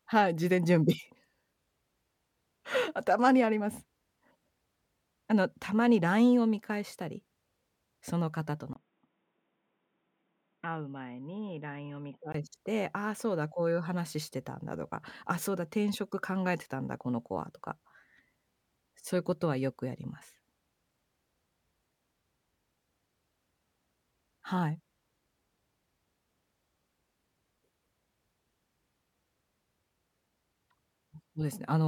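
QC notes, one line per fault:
8.73–12.34 s, input switched to a poorer device: the speech abruptly turns dull and boxy after a gap of about 20 ms, loses everything above 3.8 kHz, drops to a few decibels quieter, and carries a faint new background noise well under the speech, then snaps back to full brightness at 12.34 s. The likely cause is the recording input jumping to a narrower-band microphone or headset call profile, whose tone, gain and noise differ from the main device.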